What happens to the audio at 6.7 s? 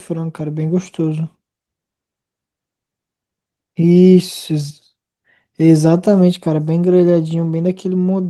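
Nothing goes wrong at 6.7 s: the speech carries on intact there, with no dropout, click or distortion.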